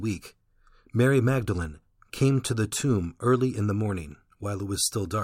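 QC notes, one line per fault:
No technical faults can be heard anywhere in the speech recording.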